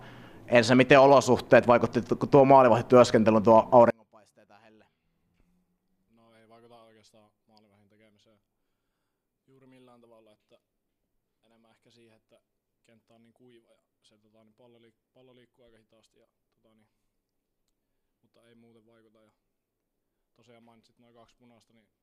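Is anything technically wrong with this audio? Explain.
Yes. From 3.90 s to the end at 22.02 s, the sound collapses to a faint residue about 37 dB quieter than before, with the centred content almost gone. The likely cause is one channel inverted: one side of the stereo pair has its polarity flipped, so when the two are summed to mono, everything they share cancels and only the small difference between them survives.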